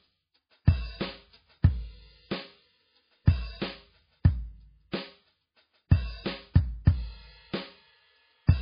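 Heavy MP3 compression runs through this music from start to finish: the treble stops dead around 5 kHz, a flat ceiling on a spectrogram, and the swirling, watery texture suggests a starved bitrate near 16 kbps as the likely cause.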